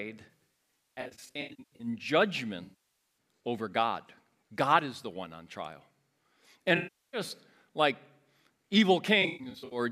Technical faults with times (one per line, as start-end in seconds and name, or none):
0.31-1.87 AAC frame loss with concealment
2.63-2.97 AAC frame loss with concealment
6.77-7.21 AAC frame loss with concealment
9.22-9.79 AAC frame loss with concealment